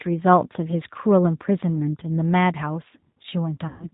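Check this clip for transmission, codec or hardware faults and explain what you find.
Two faults are audible: coding damage across the whole speech clip, and a concealed packet-loss dropout near the end.

G.729 codec, throughout: the speech is rebuilt from a vocal-tract filter, a pitch predictor and a few pulses per subframe, so nothing survives above 4 kHz. The sound is intelligible but plainly rough and synthetic, which fits the G.729A variant at 8 kbit/s. On a spectrogram, energy stops at a hard 4 kHz ceiling, and harmonics look smeared and slightly irregular.

VoIP packet loss concealed by the speech codec, 3.68 to 3.89 s: about 120 ms of audio went missing, which fits six 20 ms packets. The decoder filled the gap by repeating its last pitch and filter settings while lowering the gain each frame. The result is stretched, extrapolated sound that fades out. In the waveform, the envelope decays smoothly across the gap.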